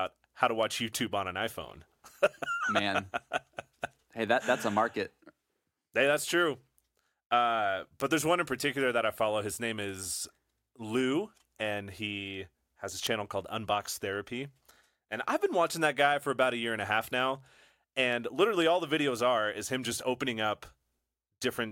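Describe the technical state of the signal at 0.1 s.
At 0.1 s the speech signal is intact, with no fault affecting it at that moment.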